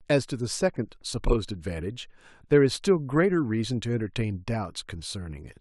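No technical faults can be heard anywhere in the speech recording, which keeps a steady, continuous signal throughout.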